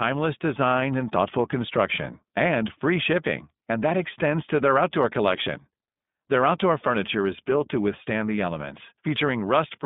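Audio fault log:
throughout iLBC codec: The audio is confined to a narrow telephone band of roughly 150 Hz to 3.6 kHz, so nothing above 4 kHz survives. The speech is clear but plainly rough and synthetic. Each 20 ms block is coded on its own, and its excitation is rebuilt from a compact model rather than kept as the real waveform. The grainy texture fits iLBC's 15.2 kbps mode. A spectrogram shows a hard ceiling near 3.6 kHz with empty space above it. The harmonics look slightly smeared and blocky along a 20 ms grid.
8.36 to 8.38 s lost iLBC frames: Just after "is built to withstand", a short piece of the audio drops out and is replaced by a brief held, faintly buzzy sound. The decoder fills the gap by repeating the last pitch cycle mixed with noise. That fill lasts about 20 ms, which fits a single lost frame. Because each iLBC frame stands alone, the speech recovers almost immediately. A waveform shows a short run of near-identical repeated cycles. 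On a spectrogram, the harmonics go flat and steady for that sliver.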